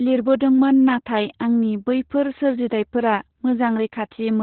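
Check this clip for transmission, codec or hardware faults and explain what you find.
The whole clip carries one codec fault, Opus voice compression. From start to finish the speech is narrowband, with nothing above about 4.2 kHz. The SILK linear-prediction coder codes the excitation coarsely, which fits a rate near 8 kbps, so the voice sounds muffled, hoarse and slightly robotic. A plain low-pass filter would only dull the sound. This clip also has that rough, synthetic texture.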